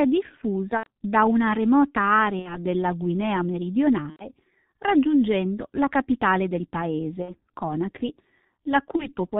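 Speech that sounds muffled and hoarse throughout, with blurred consonants and nothing above 4 kHz, is heavy G.723.1 codec damage, which fits its 6.3 kbit/s mode. At 0.77–0.87, 2.39–2.58, 4.10–4.29, 7.22–7.34 and 8.96–9.15 s, the sound smears into a fading buzzy tone or coloured noise and stays weak afterwards. This is VoIP packet loss concealed by the speech codec, covering gaps of about 90, 60, 90, 60 and 30 ms.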